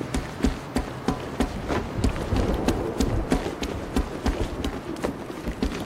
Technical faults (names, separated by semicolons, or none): none